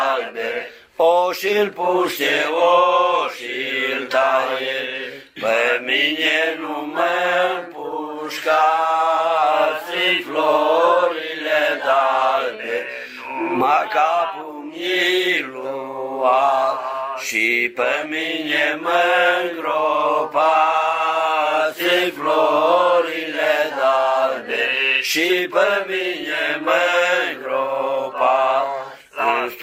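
Nothing stood out as a technical fault on listening to the clip.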